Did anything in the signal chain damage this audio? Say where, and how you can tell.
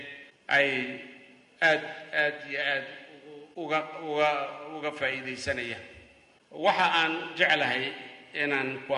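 No, nothing audible points to damage at any stage of the chain.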